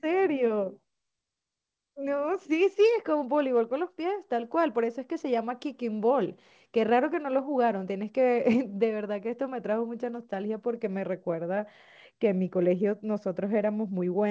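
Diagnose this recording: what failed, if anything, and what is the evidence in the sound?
Nothing failed here; the speech just came over a call link whose sound stops at 8 kHz, which fits a wideband codec along the lines of G.722 at 64 kbps doing its normal job.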